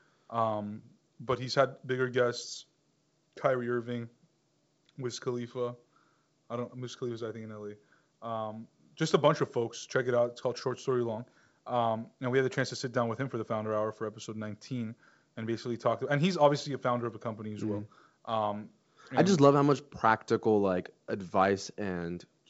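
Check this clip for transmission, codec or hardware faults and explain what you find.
Nothing stood out on listening to this speech, which comes through G.722 wideband telephone coding at 64 kbit/s with its top end stopping near 7.7 kHz.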